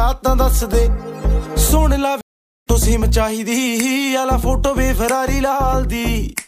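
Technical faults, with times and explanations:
2.21–2.66 s, stream reconnect: The sound drops out for 450 ms. The connection broke and the player reconnected with a fresh decoder. Playback resumes about a third of a second further on, so a short stretch of the stream is simply missing.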